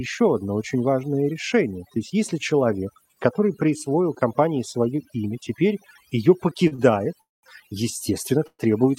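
A speech recording with overdone noise removal throughout: the background has been pushed down and breaks up into twinkling specks, because frequency bands close to the estimated noise floor were cut hard and quieter parts of the speech went with them. Right after "свое имя теперь ее" come two short stalls from a late packet, at 6.67–6.73 s and 6.75–6.92 s. In each, the last sound is held for about 39 ms and 31 ms respectively while the jitter buffer sits empty, and then playback resumes from the same point with nothing lost. Two call audio freezes follow, at 7.21–7.45 s and 8.47–8.61 s. Each has a fading sound that drops into silence, roughly 190 ms in the first and 50 ms in the second, before the audio picks up where it stopped. That points to packets held up in transit and likely a jitter buffer running dry, which inserts gaps of about 218 ms and 119 ms.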